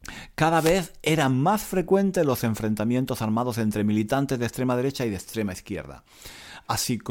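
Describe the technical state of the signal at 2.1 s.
At 2.1 s the speech signal is intact, with no audible dropout, distortion, or other technical fault at that moment.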